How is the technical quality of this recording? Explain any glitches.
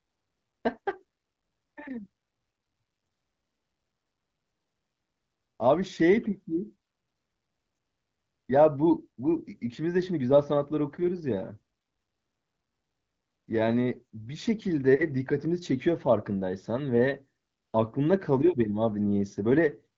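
No glitches can be heard anywhere in this speech recording.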